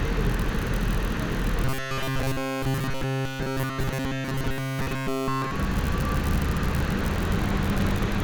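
Robotic sound from repeated short buffers runs from 1.65 to 5.51 s: the sound becomes a rigid, metallic buzz at 133 Hz, entirely built from repeats. This is likely the playback re-looping a roughly 7.5 ms stretch while fresh audio arrived too slowly.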